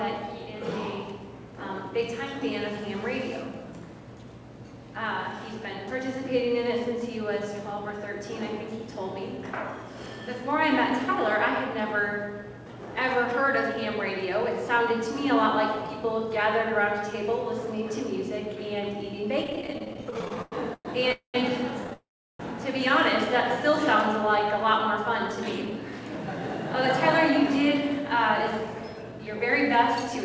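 The audio has repeated stalls (stutter) from 19.44 to 21.12 s: 28 short gaps, the longest 110 ms, where the jitter buffer ran dry and the last sound was continued, filling 521 ms, about 31% of that span, with nothing lost. Two call audio freezes follow, at 21.12 to 21.36 s and 21.93 to 22.41 s, where the sound is held and then goes quiet for 110 ms and 360 ms. Each inserts a gap (219 ms and 461 ms) before resuming where it stopped, the likely cause being delayed packets emptying the buffer. A jitter buffer slow-down runs from 23.58 to 25.71 s: pitch periods are repeated to rebuild reserve, adding 94 ms and playing at 96% speed without a pitch change. A jitter buffer speed-up from 27.57 to 30.11 s removes roughly 100 ms in small cuts to shed excess delay, running at 104% speed at unchanged pitch. The call path's band limit shows as nothing above 8 kHz, consistent with G.722.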